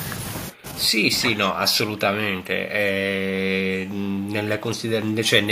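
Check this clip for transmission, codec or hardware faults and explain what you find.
Two echo-canceller faults are audible: echo leak and speech suppressed in double talk.

Echo leak appears at 0.58–0.62 s, 3.86–3.94 s, 4.2–4.28 s and 5.25–5.3 s. Brief, faint copies of the speech return 381 ms late. They sit roughly 25 to 35 dB below the speech, loudest at the end. The likely cause is a far-end loudspeaker echo that the canceller failed to remove fully.

Speech suppressed in double talk occurs at 1.19–2.29 s, 3.27–3.81 s, 4.18–4.26 s and 4.6–5.3 s. The speech dips by roughly 15 dB, and by about 10 dB in the short 4.18 s dip. This likely happens when both sides talk at once and the canceller turns down the talker along with the echo.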